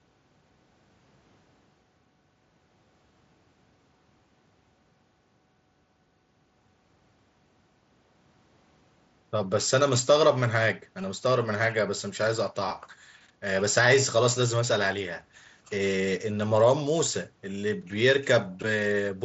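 At 11.02 s and again at 12.69 s there is concealed Bluetooth headset packet loss. Each time, about 15 ms of speech never arrived, which fits two dropped headset packets. The receiver patched each gap by repeating a matching stretch of the preceding waveform. The mSBC headset codec carries the rest with light band-limited graininess.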